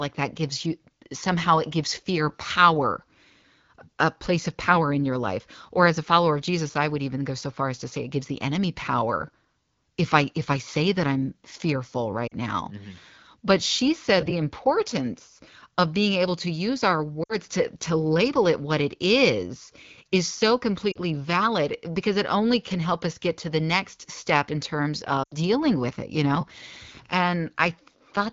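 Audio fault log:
12.27, 17.23, 20.92 and 25.23 s, lost AMR speech frames: brief gaps where the speech smears, warbles and thins out, lasting about 40, 60, 40 and 80 ms, the longest fitting a run of four 20 ms frames. Radio errors corrupted these frames, so the AMR wideband decoder rebuilt them from the last good pitch and vocal tract settings with falling gain, giving a quick fade to near silence within two frames before the speech returns, briefly weak or rough.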